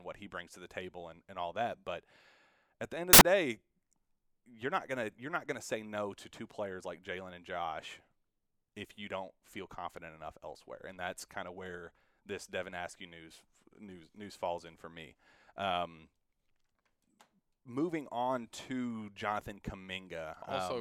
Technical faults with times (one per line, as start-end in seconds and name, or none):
3.13-3.21 samples built from the wrong bytes